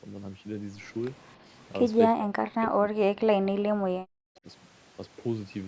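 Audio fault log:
1.37–1.46 s, speech suppressed in double talk: a brief dip of roughly 10 dB, likely the echo canceller ducking the near talker while the far side also spoke.
2.09–4.46 s, speech suppressed in double talk: same effect, much harder, dropping up to about 40 dB and chopping out for around two seconds.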